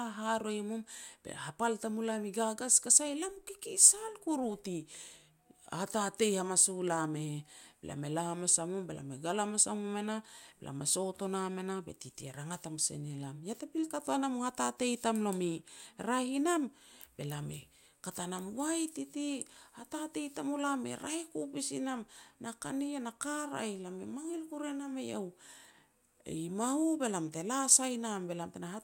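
Nothing in this recording stands out as a technical fault, so there's nothing to flag here.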